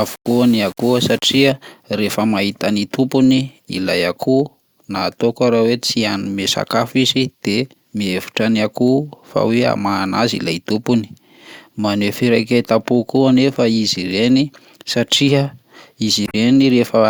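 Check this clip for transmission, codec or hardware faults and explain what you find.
Two faults are audible in this speech clip, one at the start and one near the end.

From 0.0 to 1.5 s, just before "rehefa mahita ny", the sound is gritty and coarse. The likely cause is low bit depth without dither: rounding to about 6 bits leaves error roughly 25 dB below the signal. The grain rises and falls with the speech, which sets it apart from steady hiss.

From 16.25 to 16.35 s there is a short glitch from damaged data in a compressed stream. The decoder misreads corrupted frames and resyncs at the next frame header.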